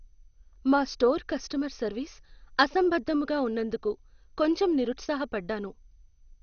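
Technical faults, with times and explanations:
Throughout: MP2 compression. The speech stops dead above about 6.5 kHz, so it sounds dull. What remains has a gurgling, granular roughness that is plainly audible. This likely comes from MPEG Layer II coding at a low bitrate, and the damage fits something near 48 kbps. The coder splits the sound into 32 sub-bands and has too few bits to share. It shuts off the upper bands and quantises the rest coarsely.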